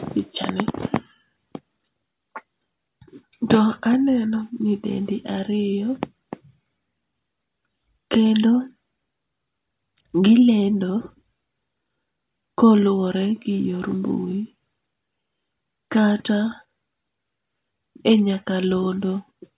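No technical faults can be heard anywhere in the recording.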